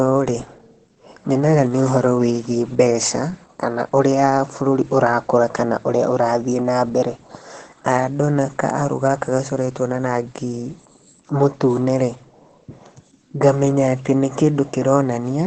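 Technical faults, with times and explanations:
Throughout, Opus compression: speech sounds heavily muffled and hoarse, with nothing above 8.8 kHz, likely from Opus's speech mode near 12 kbps.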